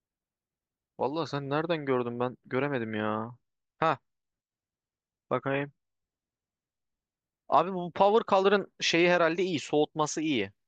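From 3.18 s to 7.18 s the speech drops abruptly to a lower-quality stream with no gap, with more codec artefacts, which fits an adaptive stream at a lower bitrate, roughly 48 kbit/s MP3 replacing about 128 kbit/s, before quality snaps back.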